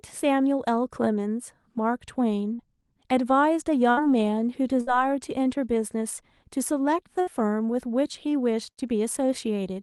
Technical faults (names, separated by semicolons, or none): burst of packet loss